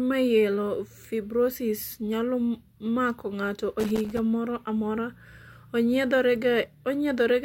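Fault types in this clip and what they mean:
Loose connector crackle: an irregular burst of scratchy crackle runs from 3.80 to 4.19 s, between "mako ng'ato" and "moro amora". A worn or dirty contact in the signal path is making and breaking as it shifts, chopping the audio into rough fragments.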